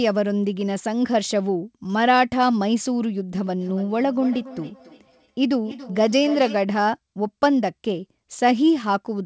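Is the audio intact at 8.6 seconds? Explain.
Yes, the speech is intact at 8.6 seconds, with no dropout, glitch or other fault at that moment.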